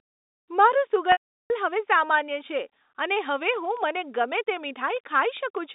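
From 1.12 to 1.50 s there is packet loss with pitch repetition. About 380 ms of audio is missing. The last pitch period repeats briefly, then fades to silence before "હવે સામાન્ય છે અને" returns.

From 3.16 to 5.58 s, a train of clicks ticks at a regular five per second, roughly fifteen in all. Each peaks near the speech level. Interference is the likely source.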